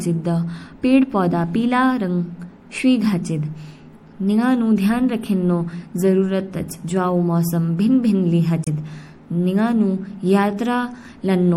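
MP3 compression runs throughout the speech and is plainly audible: dull, watery highs and swirly sibilants, likely from encoding at a low bitrate, which fits about 64 kbps. Damaged data in the compressed stream hits from 8.63 to 8.68 s, when the decoder misreads frames and resyncs, giving a brief glitch.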